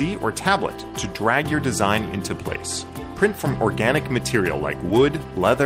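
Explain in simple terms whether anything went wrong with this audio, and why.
At about 4.89 s there's a tiny glitch: a brief smear or wobble lasting only around a hundredth of a second. This is short concealed packet loss. About 10 ms of the audio arrived too late or not at all, so the receiving end invented a stand-in by stretching out the sound just before the gap, then blended back into the real signal once it resumed.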